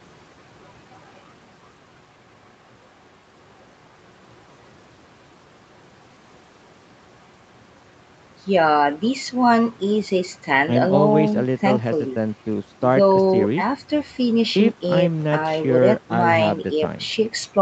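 No technical faults are audible.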